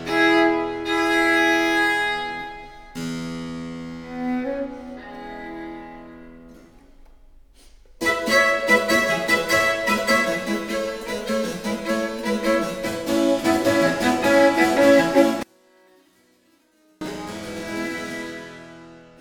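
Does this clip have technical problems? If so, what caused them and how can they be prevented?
Yes. From 15.43 to 17.01 s the sound drops by about 35 dB and nearly vanishes, likely because one channel was inverted and cancelled the other in the mono sum. Checking each channel's polarity, or watching a correlation meter, before folding stereo down to mono prevents this.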